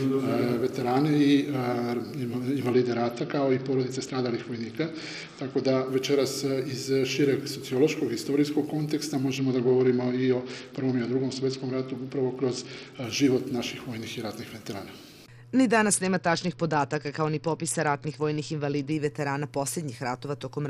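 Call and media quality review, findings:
Bluetooth SBC bit pool drop, three episodes: 2.73–5.88 s, 9.38–13.04 s, 15.93–18.92 s. Treble dulls, gritty noise rises underneath, then full bandwidth returns. Component: Bluetooth link, encoder side. Mechanism: congested link forces SBC to shed bits. Top sub-bands starved, remaining bands coarsely quantised. Depth of loss fits a bit pool cut from 31 to about 9, near 72 kbps. Recovers each time.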